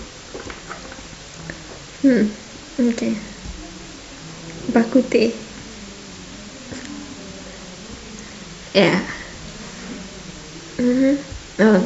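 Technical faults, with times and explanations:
Nothing in this speech recording stood out as a technical problem on listening.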